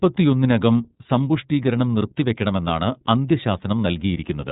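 From start to end the speech carries iLBC codec damage: a hard ceiling near 3.8 kHz, blank above on a spectrogram, and rough, synthetic texture from independently coded 30 ms frames.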